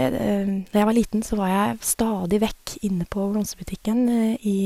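From 0.87 to 3.98 s, digital radio blends to analogue FM over 120 ms: faint hiss appears and level drops about 1 dB.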